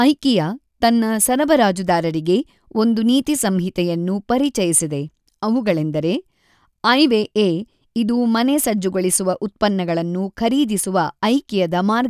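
No audible technical faults anywhere in the recording.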